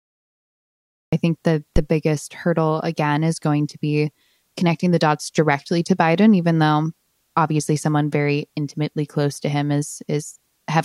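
Speech that opens with digital silence until about 1.13 s, where the audio jumps in mid-sound with no attack or fade-in. This is a cut-off start: capture or the stream began late, so the opening of the sound was never recorded. From 1.76 to 1.84 s a deep, low thump cuts across the speech and dies away within about 18 ms. That is a phantom power thump, from a supply being switched on a live input, with the voltage step passing through the coupling capacitors.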